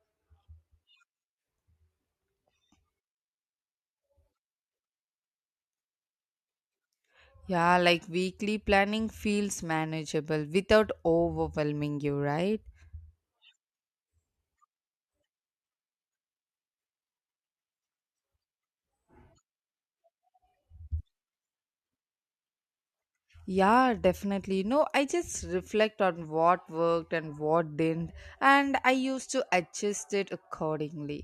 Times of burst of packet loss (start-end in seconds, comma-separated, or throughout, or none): none